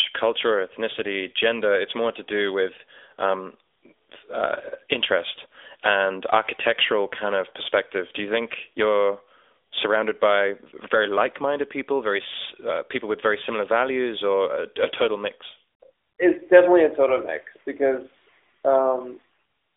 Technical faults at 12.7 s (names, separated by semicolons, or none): AMR narrowband mobile codec